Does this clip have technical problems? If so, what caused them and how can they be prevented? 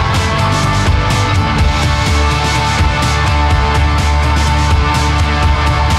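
No, there are no technical problems to hear in this clip. Nothing in it calls for a fix or a preventive step.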